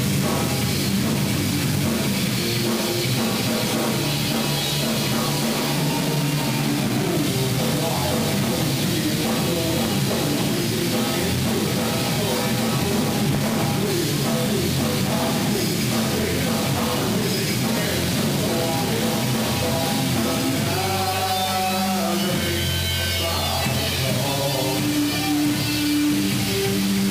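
Right through the clip the audio has that coarse, grainy crunch of low bit depth without dither. It sounds like it was likely rounded down to something like 3 bits with no dither added, so the quantisation error tracks the signal instead of sitting underneath as steady hiss. The distortion lands only about 10 dB below the sound itself, so quiet passages turn gritty, the softest bits sputter between steps or drop out entirely, and the grain shifts as the sound changes.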